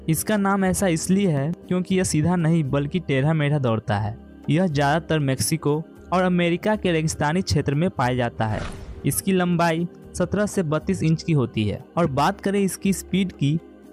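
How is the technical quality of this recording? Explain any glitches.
No glitches or technical faults can be heard anywhere in the recording. Nothing in it calls for explanation.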